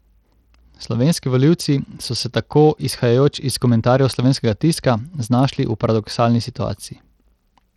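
The speech appears to have passed through a low-bitrate Bluetooth link, and the damage is most likely Bluetooth SBC compression, running for the whole clip. SBC splits the signal into a handful of wide sub-bands and shares out a small bit budget without modelling hearing, so the upper bands are starved. Across the speech the treble thins and flickers in and out, and a gritty, grainy noise with aliasing clings to it, plainly audible and consistent with a rate around 80 kbps.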